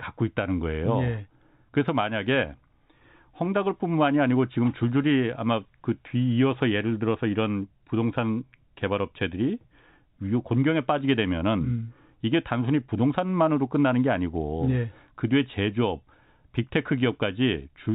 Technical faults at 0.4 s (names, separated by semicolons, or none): none